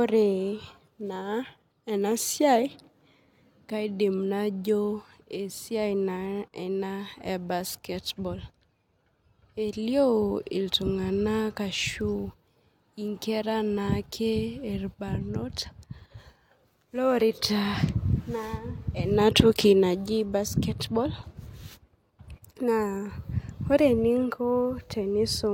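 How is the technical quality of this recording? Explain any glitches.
The recording has one stretch of degraded quality. From 16.82 to 22.82 s, an adaptive stream dropped to a lower bitrate after the connection slowed. Codec artefacts rise abruptly with no gap, consistent with a low-bitrate HE-AAC rendition.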